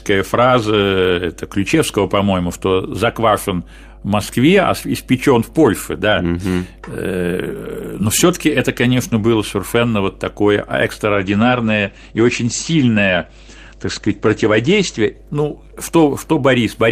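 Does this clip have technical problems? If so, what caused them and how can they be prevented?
Yes. Mains hum: a ground loop or nearby transformer couples the 50 Hz power line into the signal, adding a steady low tone roughly 20 dB below the speech throughout. Breaking the ground loop, using balanced cables and keeping gear away from transformers prevents it.

Call bitrate drop: from 11.14 to 16.55 s, just after "было совершенно вот такое", the call's bandwidth estimate fell and the encoder cut its bits. The speech turns coarse and muffled, with the top end falling from 20 kHz to 8 kHz, and is worst for about 3.1 s. That fits a drop from about 48 to 13 kbps. A stable, uncongested connection with enough upload headroom prevents it.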